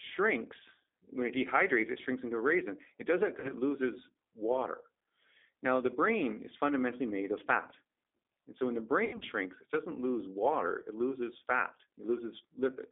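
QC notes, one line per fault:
Throughout: G.729 codec. The band is held to roughly 250 Hz to 3.6 kHz, with a rough, slightly synthetic texture, which fits an 8 kbit/s G.729A coder rebuilding speech from a vocal tract filter, a pitch predictor and a few pulses per frame.
3.40–3.53 s and 9.05–9.25 s: VoIP packet loss concealed by the speech codec. After "does that", about 40 ms of sound is lost, which points to two dropped packets. After "so when the", 120 ms is lost across 160 ms, with a longest run of 80 ms. The decoder stretches its last pitch and filter into a fading buzzy tone or coloured noise, and the speech stays weak or distorted for a while after packets return, into "loses water" and "it doesn't lose water".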